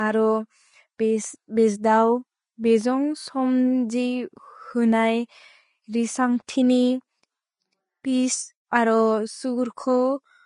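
Throughout, the speech sounds grainy and hissy with nothing above 10.6 kHz, likely from Vorbis compression at roughly 30 kbps turning fine treble detail into noise.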